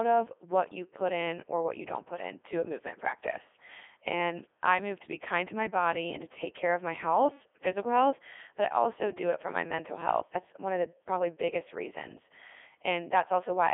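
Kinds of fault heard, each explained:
Codec 2 vocoder: Throughout the speech the voice comes across robotic and buzzy, because the waveform is never transmitted at all. Only pitch, voicing, energy and a coarse spectral envelope are sent, at a rate that sounds like the top 3.2 kbit/s mode, and the decoder rebuilds the speech from sine waves. The damage is heavy, the band is narrowed to a telephone-style 300 Hz to 3.5 kHz, and nothing is left above about 3.6 kHz.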